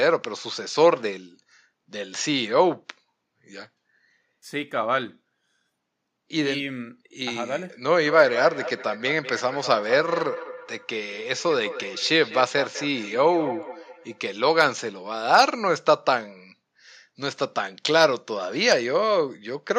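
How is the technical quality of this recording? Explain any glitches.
The recording has one clear fault, a feedback echo between two devices running from 8.05 to 14.26 s. A second device in the room replays the speech, this microphone recaptures it, and neither echo canceller removes the other's output. Each word returns roughly every fifth of a second, peaking about 12 dB below the speech. On a spectrogram, faint copies of each word's pattern trail it at even spacing. The waveform shows small echoing bursts after every peak.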